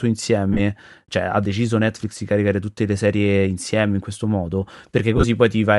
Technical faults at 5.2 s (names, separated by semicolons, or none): Bluetooth LC3 compression; lost LE Audio frames